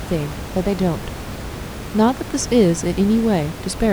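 No system faults are audible in this speech; the only background is room noise sitting about 12 dB below the talker, captured at the microphone as part of the recording.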